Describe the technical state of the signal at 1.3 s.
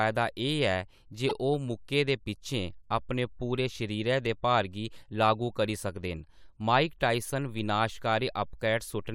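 At 1.29 to 1.31 s the speech has a repeated frames fault. A block of about 24 ms of compressed audio is decoded twice, which fits a single frame being sent again. This is heard as a brief stutter, and the clip runs 24 ms longer.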